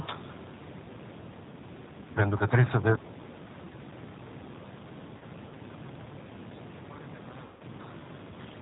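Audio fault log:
Throughout: G.729 codec. Speech is rebuilt from a vocal tract filter, a pitch predictor and a few pulses per frame. The result sounds plainly rough and synthetic. Nothing above 4 kHz comes through. The sound fits an 8 kbit/s G.729A stream.
5.18–5.23 s and 7.45–7.62 s: VoIP packet loss concealed by the speech codec. About 30 ms, then 150 ms, of audio went missing. The decoder stretched its last pitch and filter while lowering the gain. This gives a buzzy tone or coloured noise that fades, much longer in the second gap.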